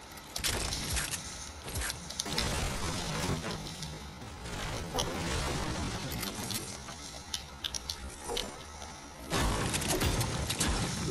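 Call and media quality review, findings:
Time-stretched section, 2.22 to 9.60 s: pace drops abruptly to about 0.6x speed, pitch unchanged. Likely a time-stretch stage padding audio to a target length by repeating short segments while preserving pitch.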